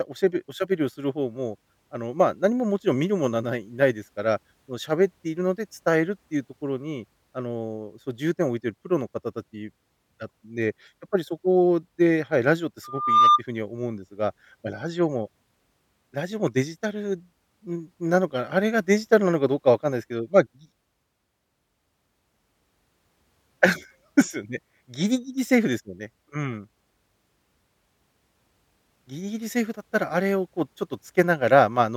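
Speech, with a burst of loudspeaker feedback squeal from 12.84 to 13.42 s. A single tone near 1.2 kHz swells over about 0.4 s to roughly 10 dB above the speech. The microphone is picking up its own loudspeaker, and the loop gain exceeds one at that frequency.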